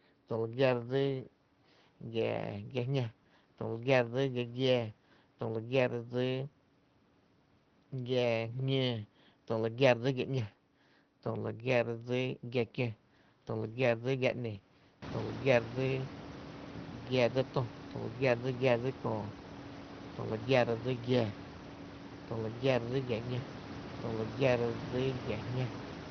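No technical fault can be heard in this speech recording: the room's background noise rises by about 23 dB at roughly 15 s and then sits about 15 dB below the speech, and the top end stops at about 6 kHz, consistent with the Opus settings of a call path.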